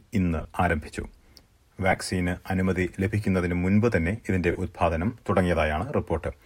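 At 0.39 to 0.45 s, 1.91 to 1.97 s and 4.52 to 4.55 s the speech breaks up into brief noisy smears, the sound of lost LE Audio frames. The gaps come in short scattered bursts, with the longest run around 20 ms, which fits 7.5 ms frames. Each time, the decoder refills the missing frames by repeating the last spectrum with randomised phase, so voiced detail turns noisy. On a spectrogram this shows as blurred, striation-free patches where harmonics dissolve. The waveform stays filled rather than dropping to silence. The light compression on the clip plays no part in these breaks.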